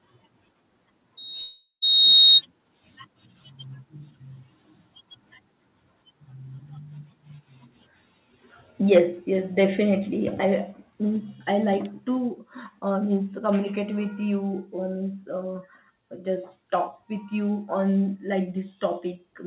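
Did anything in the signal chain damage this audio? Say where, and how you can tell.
Yes. At 1.17 s a loudspeaker feedback squeal starts. The problem is an acoustic loop between loudspeaker and microphone, ahead of any converter. A single tone near 3.7 kHz swells over about a second until it stands about 5 dB above the speech, then stops at 2.42 s. That frequency is where the loop gain passed one, so each trip around the loop reinforced it. The tone sits just below the 4 kHz ceiling the call path leaves, which points to a narrowband G.711-style codec.

From 1.42 to 1.84 s, inside the squeal, the audio gives way to a smeared continuation that fades, and the last 0.08 s or so is near silence. This is a long network dropout. Packets stopped arriving for about 0.4 s, and the receiver's concealment stretched the last sound it had before giving up. When the audio returns, those 0.4 s are gone rather than delayed, which is what a likely loss in transit on the network leg produces.

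Between 8.95 and 8.99 s there is a microphone overload. The loudest peak gains a hard, crackly edge, pushing about 3 dB past full scale, so a small share of samples are flattened at the converter's limit. The squared-off tops add that harsh buzz. The likely cause is an input gain set too high at the capture stage, before any processing could react.

The microphone volume is stepped down four times, each as a sudden drop in speech and background together: at 8.98 s by 3 dB, right on the clipped peak; at 9.99 s by 1 dB; at 11.16 s by 2 dB, just before "I like"; and at 12.18 s by 2 dB, just after "I like". The total is about 8 dB. Abrupt steps rather than smooth gain riding likely mean the call software cut the device's input volume after detecting the overload.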